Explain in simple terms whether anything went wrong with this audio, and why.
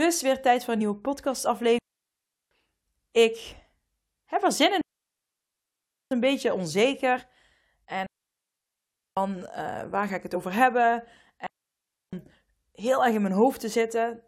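Two kinds of fault break up this speech recording.

Digital wireless dropout: the sound cuts to near silence at 1.79–2.51 s, 4.81–6.11 s, 8.06–9.17 s and 11.47–12.13 s, with gaps of roughly 0.7 to 1.3 seconds. The wireless receiver lost too much data and muted itself with a quick fade. That leaves clean holes with no crackle or noise burst around them.

Damaged data in a compressed stream: short chirps or blips occur at 0.80 s, 3.52 s, 10.35–10.37 s and 12.97–12.99 s. Each lasts one or two hundredths of a second. Bad bytes in the compressed file made the decoder misread a frame and lose its place.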